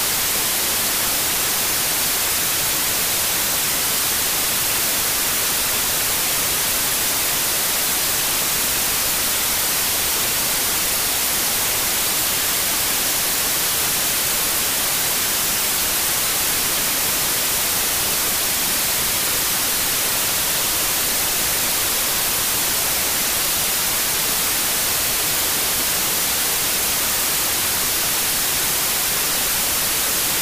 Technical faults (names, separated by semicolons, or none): wrong sample width